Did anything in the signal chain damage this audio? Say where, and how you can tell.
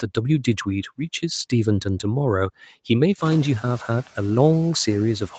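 Yes. The call processing stage introduces noise suppressor artifacts throughout the clip. The suppressor pulls steady background noise down by about 11 dB frame by frame, so the residue pumps between phrases.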